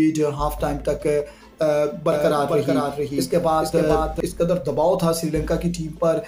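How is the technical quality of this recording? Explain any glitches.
A doubled audio track runs from 2.12 s to 4.20 s. A full-band copy of the sound trails the original by roughly 400 ms at about 5 dB lower, with no decay or room colour, and it starts and stops abruptly. The likely cause is a second capture through a slower path or an edit holding two copies out of step.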